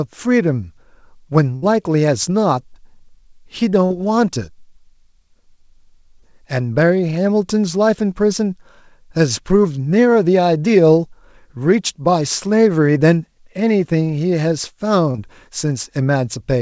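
At 1.56 to 1.64 s the speech breaks with a burst of packet loss. About 60 ms of audio never arrived in time, and the receiver bridged the hole by extending the last sound for roughly 62 ms while lowering its level, so a held buzz or fading hiss replaces it. The speech then picks up further along, with that stretch simply absent.

Three shorter gaps follow, each a short concealed packet loss: at 3.86 to 3.92 s (about 40 ms missing, 41 ms synthesised), at 6.20 to 6.24 s (about 20 ms missing, 16 ms filled), and at 15.12 to 15.16 s (about 20 ms missing, 26 ms filled). In each, the decoder continued the preceding sound and crossfaded back into the real stream, leaving a brief smear or wobble where a quick consonant may drop out. Throughout, the call codec's band limit leaves nothing above 8 kHz, which fits G.722 at 64 kbps.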